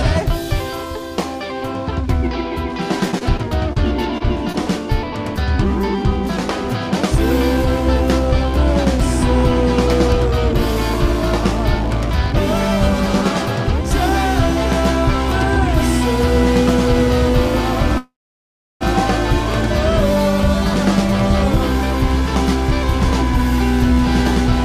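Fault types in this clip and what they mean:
Repeated packet loss (robotic sound): Between 3.11 and 4.56 s the audio breaks up in six short holes, the longest about 29 ms, each patched by stretching the preceding sound before the next hole arrives. Roughly 123 ms is synthesised fill and about 20 ms of real audio is gone, so around 9% of that stretch is concealment. The rapid alternation gives a choppy texture with small pieces missing.
Call audio freeze: From 17.98 to 18.83 s the sound stops advancing. The last sound is held briefly and then falls to silence for about 700 ms of the 830 ms pause. When playback resumes it continues exactly where it stopped, so nothing is lost but everything afterwards runs about 830 ms late. The likely cause is packets held up in transit, leaving the receiver's jitter buffer empty until they arrived.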